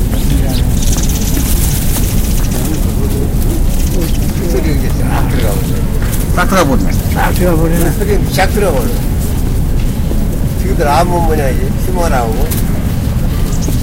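Everyday sounds, hard clipped throughout: driven about 14 dB past what the stage could pass, so a few percent of samples hit the ceiling. Loud moments turn to harsh fuzz. The waveform shows flat-topped peaks, and the spectrogram shows harmonic smearing up to the top.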